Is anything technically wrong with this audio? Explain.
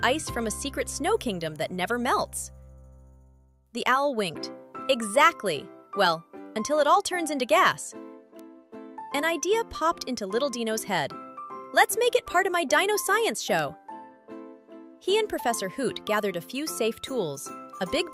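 Yes, there are two bit error spikes, at 8.39 s and 13.59 s. A single flipped bit makes a sample jump by a power of two and snap back, one sample at 8.39 s (peaking about −22 dBFS) and likely two adjacent samples at 13.59 s (about −16 dBFS). Each is a sharp, broadband tick unrelated to the surrounding sound.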